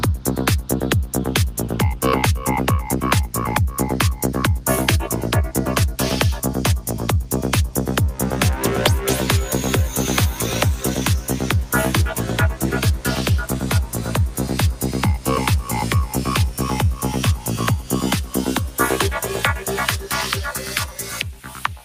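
At 21.43 s, right near the end, a short stretch of sound is cut by the noise suppressor. It lasts until 21.63 s, about a fifth of a second. The suppressor misjudged this part as background noise and pulled its level down harder than the surrounding audio. At its deepest the drop is about 5 dB. The result is a brief sag in loudness, heard as the sound dipping in level for a moment.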